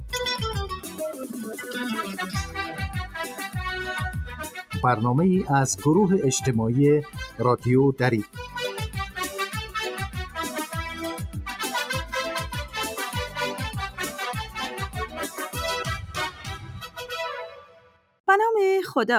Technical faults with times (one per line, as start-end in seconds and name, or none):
0.00-19.19 noise suppressor applied to music or sounds
0.76-1.00 sound cut by the noise suppressor
4.44-4.74 sound cut by the noise suppressor
7.06-7.40 sound cut by the noise suppressor
15.07-15.39 sound cut by the noise suppressor
16.07-16.99 sound cut by the noise suppressor
17.48-18.20 sound cut by the noise suppressor